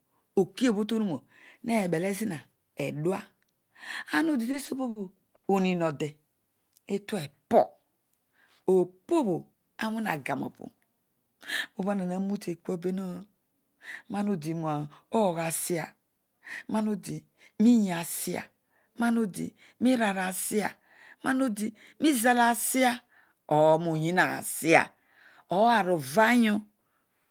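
Right after "ama odi", from 4.51 to 5.46 s, there's a stutter from repeated stalls: the jitter buffer ran dry four times, with the longest gap at 80 ms. The receiver stretched the last sound to fill each gap, so nothing's lost, but the speech drags.

Later there's jitter buffer speed-up at 16.18 to 16.83 s, 20.54 to 21.70 s and 23.94 to 25.69 s. The buffer trimmed excess delay by cutting tiny pitch-period slices, so the speech runs about 4 to 6% faster at the same pitch, and the first two stretches sound hurried.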